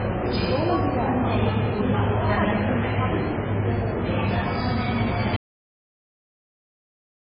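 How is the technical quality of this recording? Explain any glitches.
The recording is poor, with heavy compression damage throughout and a loss of signal near the end.

MP3 compression: Across the whole clip nothing is present above 5 kHz, and the remaining sound has a watery, swirling quality as weak frequency components flicker on and off between frames, most likely from MP3 encoding at a very low bitrate. That flickering distinguishes it from a simple low-pass filter, which would dull the treble cleanly without adding the swirl.

Audio dropout to silence: From 5.36 s to the end the sound cuts out abruptly to silence, likely because the input was lost while recording continued and silence was written. No room tone or noise floor remains, which distinguishes it from a fade or a noise gate.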